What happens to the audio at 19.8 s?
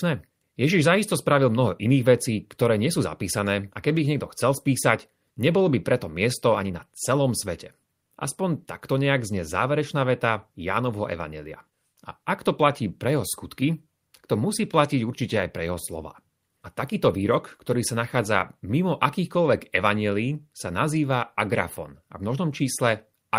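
Nothing goes wrong at 19.8 s; the speech there is intact, with no dropout, click, glitch or other fault.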